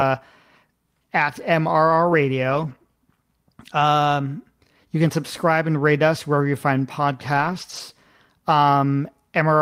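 At 2.49 to 2.71 s, and again from 7.33 to 7.79 s just after "us wherever you find", the speech turns rough and noisy without any gap. Both are lost packets rebuilt from error correction. Each lost packet was recovered from a low-bitrate copy carried in the next one, and the decoder played that copy. About 120 ms and 240 ms were rebuilt, which fits runs of roughly six and twelve 20 ms packets.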